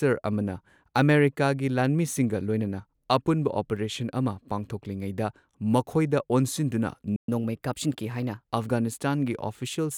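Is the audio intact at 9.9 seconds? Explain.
Yes, at 9.9 seconds the speech plays through intact, with no dropout, click, distortion or other fault at that moment.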